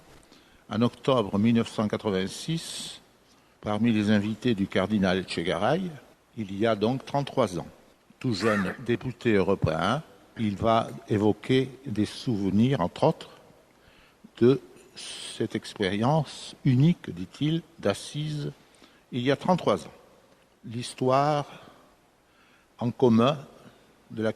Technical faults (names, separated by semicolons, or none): none